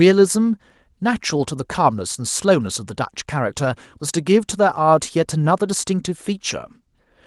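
Nothing goes wrong in this speech clip; it comes through a normal call path, with the top end rolling off around 12 kHz as you'd expect from Opus at a moderate setting, which fits roughly 32 kbps.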